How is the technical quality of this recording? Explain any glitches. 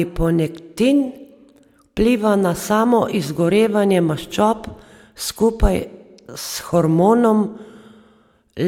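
Nothing in the speech stood out as a technical problem on listening.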